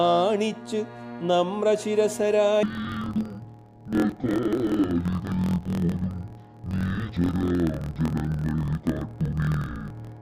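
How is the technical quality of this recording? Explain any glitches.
The recording breaks down partway through. From 2.63 s to the end, interleaved audio is read as planar: each 24 ms block's alternating left-right samples get split into halves, so both channels play at half speed together. The sound drops an octave, doubles, and chops at 41.7 Hz.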